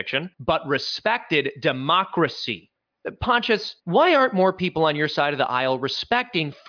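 A speech clip, and nothing is technically wrong with it.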